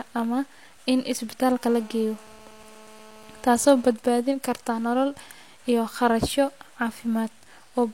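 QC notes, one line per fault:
1.63–3.93 s, GSM phone buzz: steady, raspy 217 Hz buzz rich in harmonics, about 25 dB below the speech, from rectified handset transmit bursts; clears before "karta nolol iyo".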